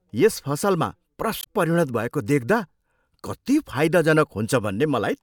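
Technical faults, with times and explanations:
1.40–1.47 s, damaged data in a compressed stream: corrupted bytes in the coded stream made the decoder misread frames and lose sync until it found the next valid header, so after "यस फसलमा" the speech briefly breaks up before "परिणत भएको".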